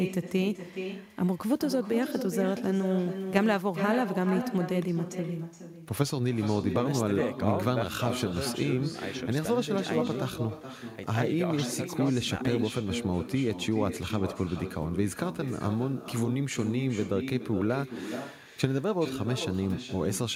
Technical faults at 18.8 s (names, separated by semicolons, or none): echo with no canceller